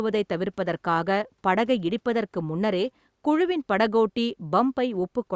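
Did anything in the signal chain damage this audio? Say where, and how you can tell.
No, nothing in the signal chain damaged this speech. It has been through a call's microphone processing, which leaves nothing above 8 kHz and trims the lowest bass, as that stage normally does.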